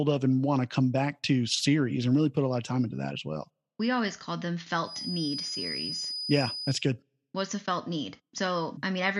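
A loudspeaker-to-microphone loop was likely held at the edge of feedback, so one tone rang on without running away. From 4.80 to 6.86 s, after "we always called them", a thin 5 kHz feedback whistle sits about 10 dB under the speech, swelling and fading slowly.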